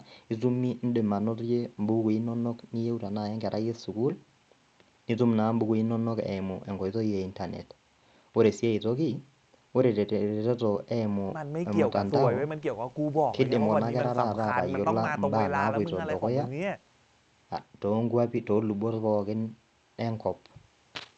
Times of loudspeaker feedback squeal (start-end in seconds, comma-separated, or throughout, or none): none